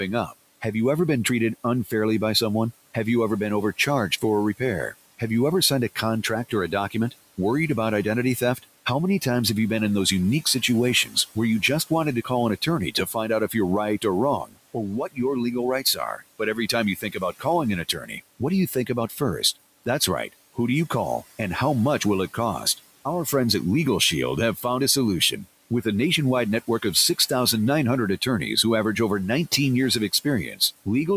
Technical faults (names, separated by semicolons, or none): speech cut by the noise suppressor